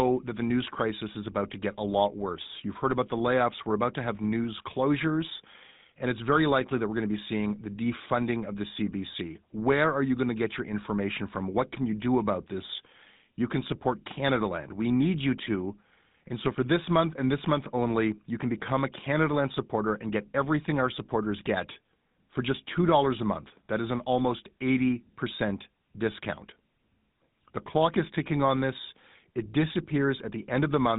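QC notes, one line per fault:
Throughout, GSM full-rate codec: plainly audible buzzy, gravelly speech from coarse pulse excitation, fitting roughly 13 kbps, and nothing above 3.8 kHz.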